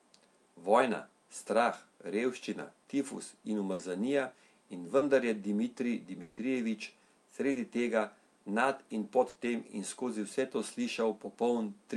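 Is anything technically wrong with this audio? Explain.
Yes, the speech is interrupted five times by network packet loss.

At 3.73–3.81 s, just after "strah revščina tifus in", and again at 9.29–9.37 s, between "tega nad in pod" and "tem in skozi vse", the last sound is held and fades for about 60 ms before the speech jumps ahead. This is a burst of packet loss: consecutive packets were lost or arrived too late, the receiver stretched what it had, and 60 ms of the original was lost.

At 4.97–5.03 s, and at 7.51–7.57 s just before "tega nad in pod", there is a brief smear lasting about 40 ms. Each is a short concealed packet loss, where the decoder briefly synthesised the missing audio from the preceding sound and then blended back in.

At 6.21–6.39 s, the sound drags out and fades for 160 ms, with no silence, and the speech then resumes further on. The likely cause is a long network dropout whose missing stretch was entirely covered by concealment.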